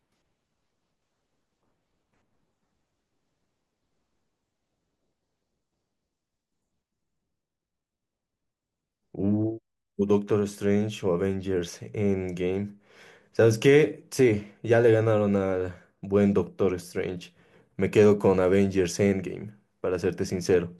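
Nothing goes wrong anywhere in this stretch of speech, so there's no technical fault to point out at any moment.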